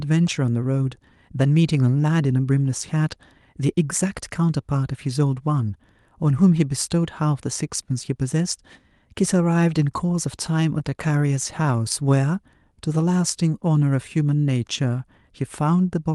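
Speech that briefly drags and stutters from 10.79 to 11.92 s with eleven tiny holds, none longer than 14 ms, because repeated stalls (stutter) emptied the jitter buffer and the receiver stretched the last sound until audio resumed.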